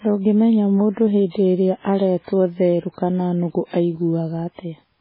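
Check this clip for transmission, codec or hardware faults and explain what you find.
There's one fault, running through the whole speech clip: heavy MP3 compression. Nothing comes through above about 5.3 kHz, so it sounds dull and watery, with swirly, chirpy sibilants and smeared attacks. That points to a very low bitrate, likely around 16 kbps, where the encoder drops the treble and switches weak frequency lines on and off between frames.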